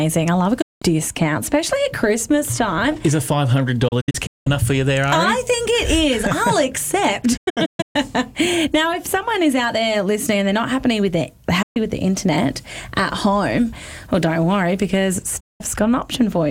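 The audio drops to silence five times, each with a fast fade of about 8 ms: a single gap at 0.62–0.82 s, broken clusters of short holes across 3.88–4.47 s and 7.37–7.96 s, then single gaps at 11.62–11.77 s and 15.40–15.61 s. This is digital broadcast dropout. The receiver muted whenever frames arrived corrupted or missing, and the gap lengths in multiples of 32 ms fit that frame size. Whatever was transmitted during those holes is gone.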